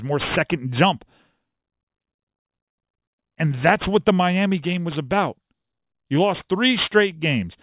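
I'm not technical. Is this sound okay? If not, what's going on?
No. Throughout, the speech has aliasing: it fits a drop to an 8 kHz rate without filtering, so everything above 4 kHz folds back to wrong pitches, making sibilants gritty and metallic.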